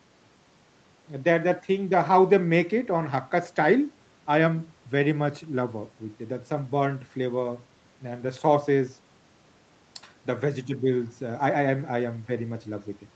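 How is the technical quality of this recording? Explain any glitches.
No glitches are audible anywhere in this recording.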